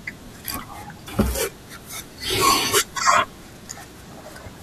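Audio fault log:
1.05–1.09 s and 4.48–4.52 s, damaged data in a compressed stream: two brief glitches, each about 40 ms long, in the speech. Corrupted bytes in the encoded stream make the decoder misread those frames and lose sync until it locks onto a valid frame header again.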